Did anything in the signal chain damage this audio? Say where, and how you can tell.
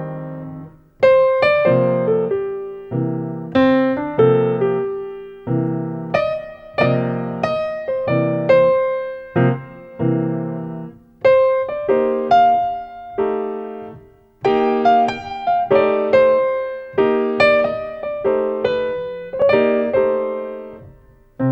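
Yes. At 19.42 s there is a block of digital silence, a gap of 2.9 ms that fits a 128-sample buffer going unfilled. That places the fault at the driver or buffer stage: the output block was delivered as zeros rather than audio. With no fade on either side, the signal drops out and returns abruptly, so it is heard as a tick or dip. On the waveform it shows as a brief flat line. On the spectrogram it is a thin vertical broadband stripe.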